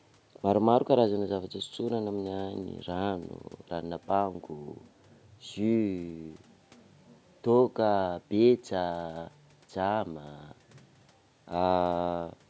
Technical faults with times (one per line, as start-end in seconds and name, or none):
none